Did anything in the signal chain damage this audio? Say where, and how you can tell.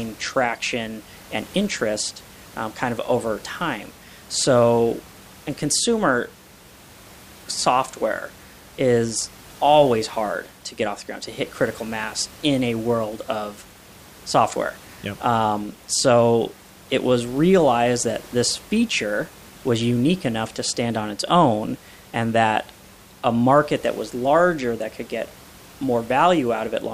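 No, nothing in the signal chain damaged this speech; the only thing to hear besides the speaker is the room's own background noise, about 24 dB below the speech, which was picked up by the microphone.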